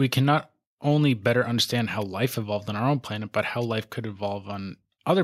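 No technical faults can be heard in the recording.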